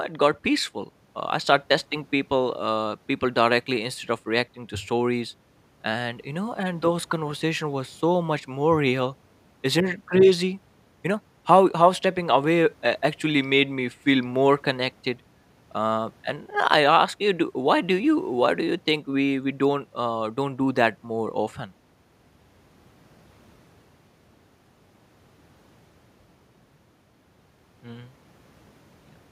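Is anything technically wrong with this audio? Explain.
No, nothing is technically wrong with this audio.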